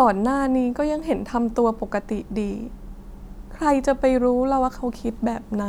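Nothing stood out on listening to this speech recording.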